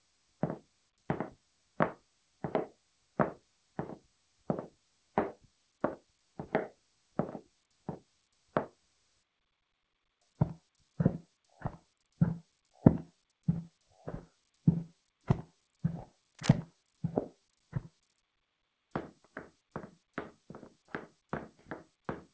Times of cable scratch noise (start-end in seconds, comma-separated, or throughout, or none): 16.35-16.51